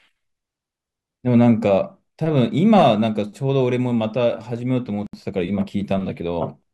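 A gap at a join of encoded pieces opens at 5.07 s and runs to 5.13 s, a silence of about 68 ms cut into continuous speech. The audio appears to have been encoded in separate pieces, joined every 6.0 s, without trimming the encoder's start-up delay or the padding on each piece's final frame, so that dead air remains at the seam. The speech halts with a smeared edge, then resumes where it stopped.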